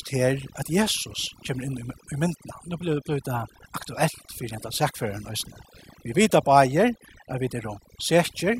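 Overdone noise removal runs throughout the speech: an over-aggressive noise reducer gates bands near its noise estimate, leaving twinkling specks in near silence and taking quiet parts of the voice with them.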